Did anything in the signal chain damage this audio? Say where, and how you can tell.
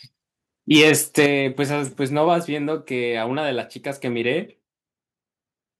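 Yes. The first fault sits at the converter input. Harsh, crackling distortion rides on the loudest speech from 0.74 to 0.91 s and again from 1.18 to 1.26 s. The peaks there are flattened rather than rounded. This is likely microphone overload. The input gain was set too high, so peaks drove past full scale, by about 6 dB in the first stretch and about 4 dB in the second. The converter sliced their tops off, and only a small share of samples was affected.

The second fault comes from call processing. At 1.26 s, right as the second distorted peak ends, the whole signal drops by about 5 dB in a single step and stays there. The background falls along with the speech. That rules out a change in how the talker spoke. It points to a change in input gain. This is likely the microphone volume stepped down by the call software, which reacted to the clipping just before it by cutting the device's input level.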